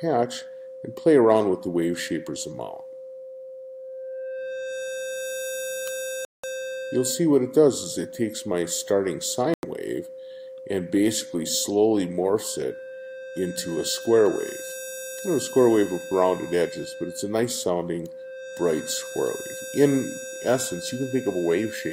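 At 6.25 s the sound cuts to silence and returns at 6.44 s, a gap of about 0.19 s. At 9.54 s a shorter hole of about 0.09 s follows, ending at 9.63 s. Both times the audio resumes further along, as though it kept playing underneath. This is likely a Bluetooth dropout, where packets failed to reach the headphones in time and were discarded. The gap lengths fit roughly eight and four lost packets.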